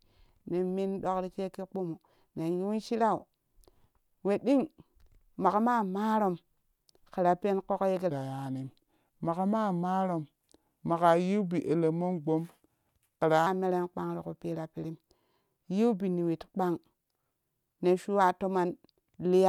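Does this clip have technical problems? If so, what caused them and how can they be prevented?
Yes: from 8.10 to 13.47 s, just before "meren kpan tiku pira", there's a section at the wrong speed. The speech runs at 0.855x, dropping about three semitones, likely from playback on a mismatched clock. Check that sample rates match across every editing and playback stage.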